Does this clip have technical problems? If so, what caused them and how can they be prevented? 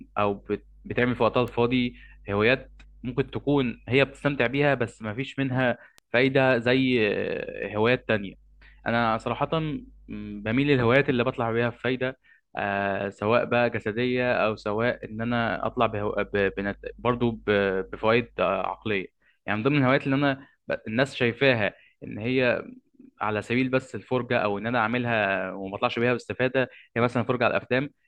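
Yes. Two sharp, isolated ticks at 1.48 s and 5.98 s, peaking around -20 and -26 dBFS, are bit error spikes: a flipped bit made the sample values jump and snap straight back. Error-checked digital links and ECC memory prevent them.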